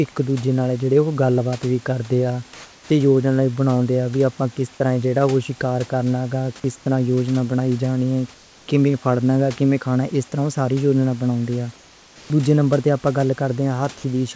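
From 2.54 to 2.90 s the room background turns into a smoother, more even hiss at the same level. This is comfort noise in place of the background, likely synthesized by the receiver while the sender paused transmission. From 6.60 to 6.64 s, about 20 ms of speech gives way to steady noise. This is sound dropped by the voice detector, which likely mistook the sound for background. The same smooth substitute hiss returns from 6.76 to 6.86 s, 8.34 to 8.68 s and 11.76 to 12.30 s, each time about 2 to 3 dB quieter than the real room noise. These are likely further comfort-noise fills in pauses. Throughout, nothing above 8 kHz is present, which fits the G.722 call path.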